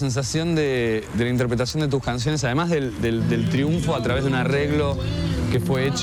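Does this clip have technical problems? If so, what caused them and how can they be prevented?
Yes: word clock ticks run from 0.14 to 5.96 s, a regular tick about every 0.1 s from unsynchronised clocks drifting around 200 ppm. Their even spacing distinguishes them from random clicks. Prevent this by locking the receiver to the sender's word clock.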